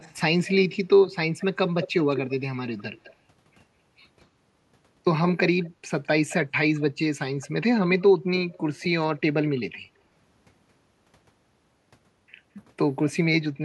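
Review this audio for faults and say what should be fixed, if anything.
Echo leak: a copy of the speech trails it by 202 to 216 ms at 0.00–0.53, 1.39–3.15, 5.63–6.82 and 7.40–9.60 s. It is strongest around 1.4–3.2 s and appears on a spectrogram as repeated harmonic bands shifted right. The likely cause is loudspeaker pickup that an echo canceller missed. A headset or a retuned canceller on the loudspeaker side prevents it.

Background gated by the echo canceller: at 5.69–5.80 s the room sound drops by about 12 dB for roughly 100 ms. It appears as a brief notch in the noise floor on the waveform and spectrogram. Gentler microphone suppression during loudspeaker playback would prevent it.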